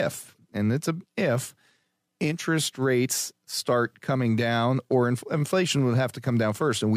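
No technical faults can be heard anywhere in the speech recording. Nothing in the sound points to trouble with how it was captured, processed or delivered.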